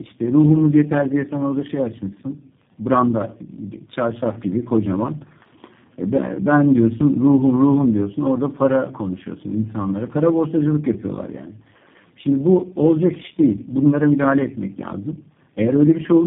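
Tandem speech coding runs through the whole speech clip: the call passed three low-rate speech codecs in a row, GSM full rate, AMR-NB and finally G.729A, each re-coding the last one's damage, leaving rough, muffled, warbly speech with nothing above 3.7 kHz.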